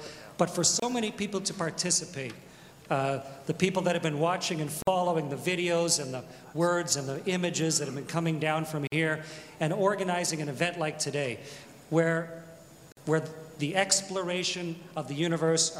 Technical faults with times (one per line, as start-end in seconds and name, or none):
0.80-0.82 gap at a join of encoded pieces
4.82-4.87 gap at a join of encoded pieces
8.87-8.92 gap at a join of encoded pieces
12.92-12.97 gap at a join of encoded pieces